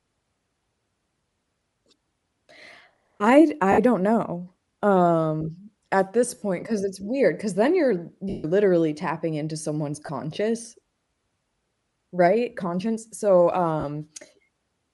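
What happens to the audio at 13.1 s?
At 13.1 s, as across the whole recording, the speech has passed through a low-rate transform codec, likely Bluetooth LC3 compression, consistent with 10 ms frames at around 48 kbps. Sparse upper-band content is replaced with fill noise, leaving a plainly audible breathy, grainy edge on the speech.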